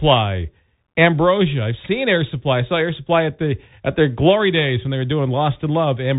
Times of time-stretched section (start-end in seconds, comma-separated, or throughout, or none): none